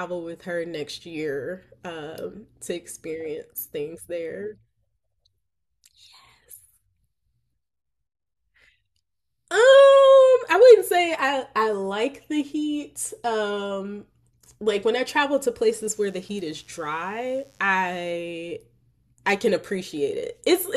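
From 15.66 to 18.14 s a faint mains buzz, roughly 40 dB below the speech, rasps through: switching spikes on 50 Hz mains spray harmonics into the kilohertz range, unlike smooth low hum.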